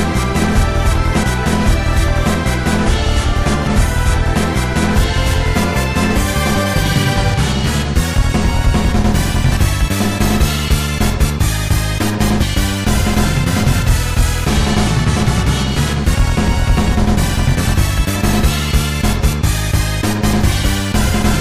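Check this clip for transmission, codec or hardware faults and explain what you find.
Compressed frames skipped, five times: at 1.22, 3.66, 9.51, 18.15 and 20.63 s. Whole decoded frames, consistent with roughly 23 ms frames, never play, so the audio jumps ahead by about a tenth to a third of a second. The waveform shows an abrupt content discontinuity, and the spectrogram shows patterns cut off mid-stream.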